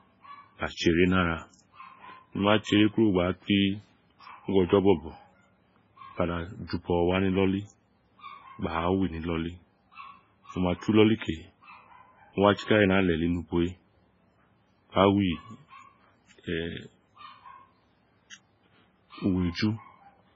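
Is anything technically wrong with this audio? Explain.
Yes, there are two problems. Throughout the clip the speech sounds watery and swirly, with metallic chirping on s sounds and smeared consonant attacks, and nothing is heard above 7.5 kHz. This is likely MP3 compression, and the heavy damage fits a very low bitrate of around 16 kbps. Starved of bits, the encoder cut the treble at a fixed point and dropped weak frequency lines, which flicker on and off between frames.

From 18.30 to 18.33 s a brief hiss comes just before a sharp attack, and the attack itself sounds softened. This is pre-echo. The codec spread its quantisation noise evenly across a whole block, so noise sized for the loud onset also filled the quiet 34 ms ahead of it.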